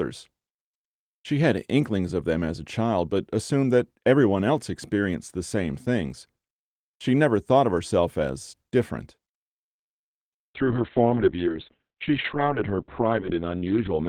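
Speech with a call bitrate drop from 10.56 s to the end. The sound turns rough and muffled. Bandwidth falls from 20 kHz to 4 kHz. The coarse coding fits the encoder going from 32 kbps to 6 kbps. It stays lowest for 3.16 s.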